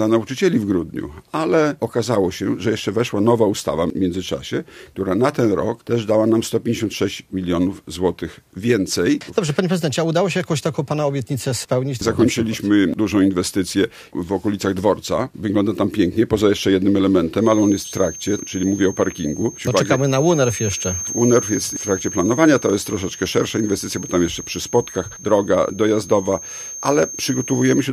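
From 17.35 s to the end at 27.92 s, a feedback whistle sits behind the sound: a thin, steady tone at 6.4 kHz, roughly 15 dB under the main signal, its level swelling and fading slowly. The likely cause is a loudspeaker-to-microphone loop held right at the edge of feedback, so one frequency keeps ringing without building up. On a spectrogram it appears as a narrow horizontal line at 6.4 kHz; the waveform barely shows it.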